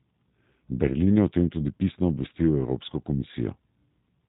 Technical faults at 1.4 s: G.729 codec

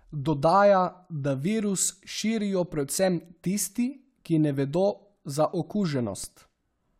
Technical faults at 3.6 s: none

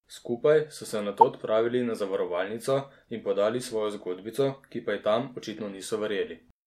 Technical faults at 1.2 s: corrupt frame decoded

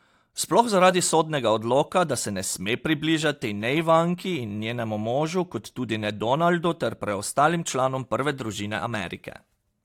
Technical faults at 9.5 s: none

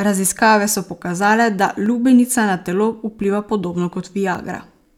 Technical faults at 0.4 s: none

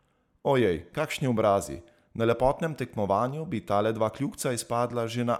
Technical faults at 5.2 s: none

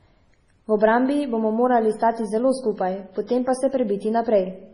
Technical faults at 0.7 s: MP3 compression

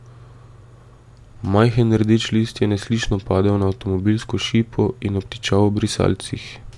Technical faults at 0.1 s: none

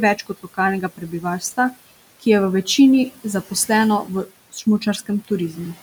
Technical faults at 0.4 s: speech cut by the noise suppressor

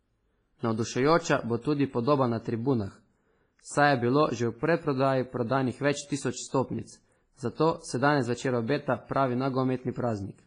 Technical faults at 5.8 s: WMA compression

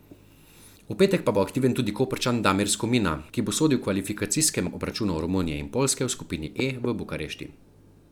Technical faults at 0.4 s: none

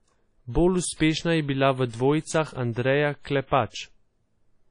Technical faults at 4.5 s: WMA compression

